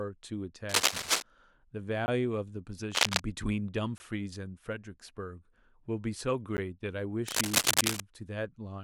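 From 0.69 to 1.22 s, 2.92 to 3.20 s and 7.27 to 8.01 s, a scratchy, rustling cable scratch noise sits a bit louder than the speech, likely from a worn lead or connector being moved. Blocks of digital silence at 2.06–2.08 s, 3.98–4.00 s and 6.57 s cut the audio out with no fade; the first two are heard as short holes, and the briefer one at 6.57 s as a tick or dip.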